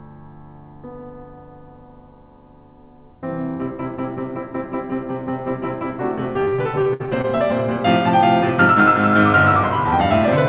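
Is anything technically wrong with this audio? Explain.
Yes. From 6.44 to 7.25 s the music suffers repeated packet loss (robotic sound). Seven packets went missing in quick succession, the longest gap 61 ms, and each hole was patched by extending the preceding audio, so about a quarter of that stretch is concealment. The passage turns choppy, with fragments dropped out. The band-limited call sound, with nothing above 4 kHz, points to a narrowband telephone codec such as G.711.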